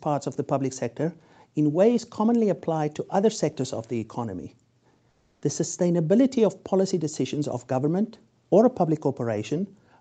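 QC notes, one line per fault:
5.09–5.41 s, comfort noise in place of the background: for about 320 ms the real background, already about 43 dB below the loud parts, turns into a flat, featureless hiss about 5 dB quieter. The likely cause is Opus discontinuous transmission pausing, with the receiver filling the gap with synthetic noise.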